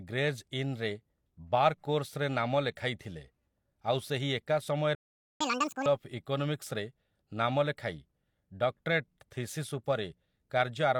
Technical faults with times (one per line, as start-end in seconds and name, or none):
2.76 pre-echo
4.95-5.41 playback stall
5.41-5.86 catch-up at higher speed